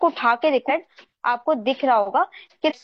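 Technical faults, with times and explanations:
0.65–0.71 s and 2.65–2.72 s: damaged data in a compressed stream. Corrupt bytes made the decoder misread frames and lose sync, producing a brief break of about 54 ms and 68 ms respectively. Unlike a clean dropout or concealment repeat, it comes from the decoder losing its place in the stream and searching for the next frame header.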